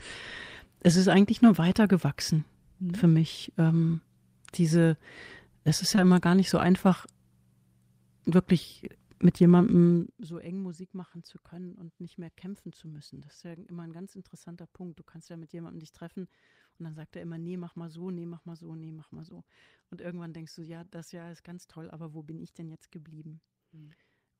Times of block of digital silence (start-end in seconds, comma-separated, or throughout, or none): none